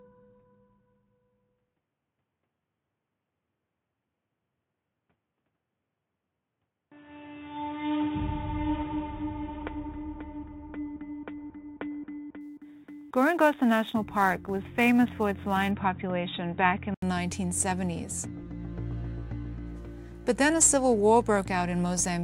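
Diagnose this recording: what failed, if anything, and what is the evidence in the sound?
Dull, boxy sound with nothing above 3.8 kHz until 17.02 s, then an 80 ms gap and a clear return: likely an input switched to a poorer device.

From 12.41 to 15.71 s, hiss roughens loud, bright passages and vanishes in quiet: sample clock jitter at the converter, around 10 µs.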